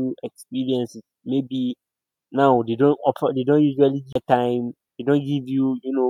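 A CD skip occurs at 4.13 to 4.15 s, right after "offer they don't usually". A knock or a flaw in the disc surface threw the player's laser off its track onto another turn of the spiral. The player mutes for around 30 ms while it recovers, heard as a small tick and gap in the speech. When playback resumes, it picks up from a different point on the disc, so the speech jumps abruptly instead of continuing smoothly.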